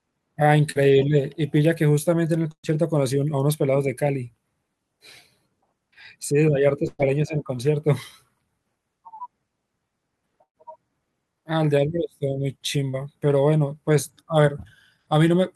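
At 0.71 s the speech briefly smears, a quick wobble lasting well under a tenth of a second. This is short concealed packet loss: about 40 ms of audio never reached the decoder in time, and the receiver bridged the hole by extending the preceding sound before blending back into the real signal. The same brief smear returns at 12.90 s, where another 40 ms went missing and was patched in the same way.

Longer breaks come at 2.51 to 2.66 s, 6.87 to 7.02 s and 10.43 to 10.57 s. Each time the last sound is drawn out and fades, then the speech picks up further along with a piece gone. Each is a burst of packet loss of about 120 ms. The receiver extended the previous sound while turning it down, and the gap ends in silence: about 80 ms at 2.51 s, a brief 20 ms at 6.87 s and about 90 ms at 10.43 s.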